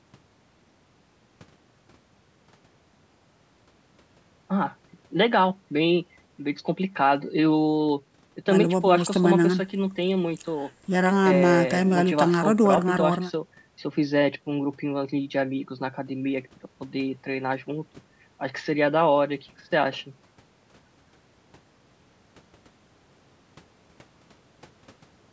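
No technical faults are audible.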